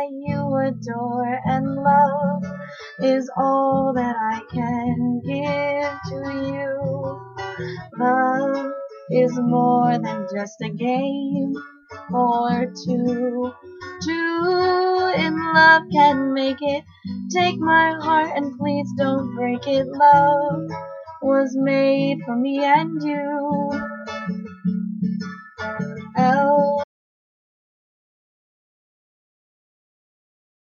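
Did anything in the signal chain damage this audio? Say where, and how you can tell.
Yes. At 26.84 s the sound cuts off abruptly and never returns. From there to the end there is silence, with no room tone or noise floor. That is an audio dropout to silence. The likely cause is a lost input, such as a disconnected device or a failed link, while the recorder kept writing zeros.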